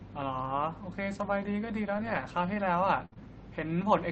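From 1.93 to 2.15 s, six lost packets were rebuilt from error correction. About 120 ms of speech was replaced by low-bitrate backup copies, so it sounds rougher and noisier, without a gap.

At 3.05 to 3.14 s, a burst of packet loss stretches the last sound for about 63 ms while it fades into a held buzz or hiss. About 60 ms of speech is simply missing.

Right after, at 3.14 s, a short concealed packet loss fills a 20 ms hole with continued sound. This is heard as a brief smear or wobble before normal audio returns.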